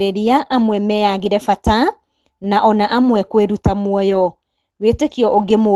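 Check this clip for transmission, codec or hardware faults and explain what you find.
One transmission fault is audible. From 4.09 to 4.15 s, just after "na ona amwe kwĩruta", there is a lost packet rebuilt from error correction: roughly 40 ms of speech, about two packets' worth, was lost, and the decoder played the reduced-bitrate copies carried in the following packets. The result is no gap, but a brief rougher, noisier patch within the surrounding Opus call audio, which is band-limited to 12 kHz.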